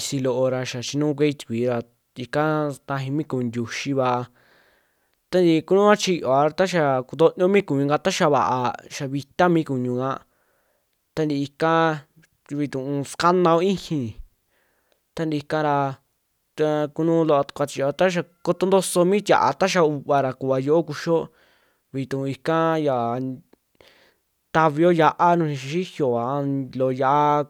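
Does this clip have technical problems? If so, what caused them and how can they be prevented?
No, nothing in this speech recording stood out as a technical problem on listening, so there is nothing to trace back or guard against.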